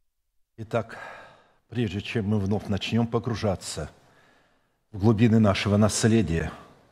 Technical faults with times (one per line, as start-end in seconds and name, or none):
6.39 Bluetooth stall